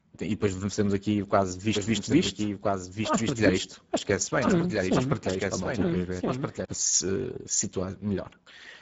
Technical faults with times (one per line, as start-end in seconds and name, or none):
0.00-8.82 Speex codec
1.75-6.65 doubled audio track